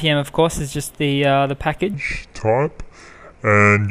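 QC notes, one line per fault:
1.94 s to the end: section at the wrong speed. From this point the sound suddenly drags and drops in pitch, running at about 0.69 times its proper rate, so everything stretches out and sits roughly seven semitones lower, close to a fifth down. Because speed and pitch fall together at a single instant, the cause is likely this stretch being played against the wrong clock, as when an editor or player assumes a different rate from the one the audio was made at.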